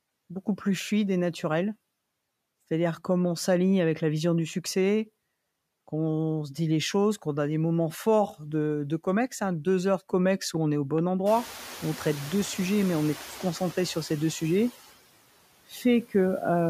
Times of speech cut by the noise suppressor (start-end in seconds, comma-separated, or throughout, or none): 15.69-15.84